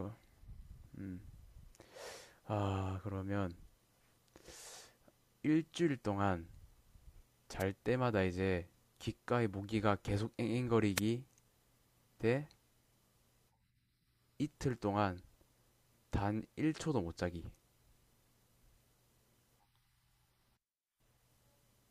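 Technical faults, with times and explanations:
7.59–7.63 s and 10.95–11.00 s, wireless microphone noise hit: two short bursts of static swish across the speech, each about 45 ms long. The FM radio link briefly faded, probably from reflections cancelling, so receiver noise surged up and masked the audio.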